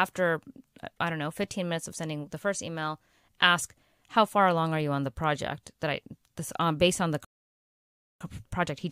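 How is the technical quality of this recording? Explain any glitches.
There is one glitch, a rebuffering stall late in the speech. At 7.25 s the audio drops abruptly into silence, holds there until 8.21 s, then picks up at exactly the point where it broke off, with nothing skipped or repeated. The player had used up all the audio it had downloaded and had to wait for more data before continuing. No content is lost, but the pause stretches the clip by about 0.96 s.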